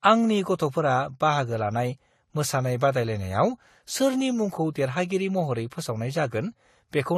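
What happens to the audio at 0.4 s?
At 0.4 s the speech carries artefacts of transcoding between lossy codecs, present throughout the clip. Nothing sounds above 13.8 kHz, and two layers of coding artefacts overlap, likely from an AAC encode re-encoded to Vorbis at a lower bitrate, each pass adding its own damage.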